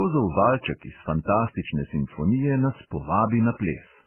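Throughout, the speech sounds narrow and dull, with mixed swirling and smearing layered together, likely transcoding between lossy codecs rather than one codec's single artefact.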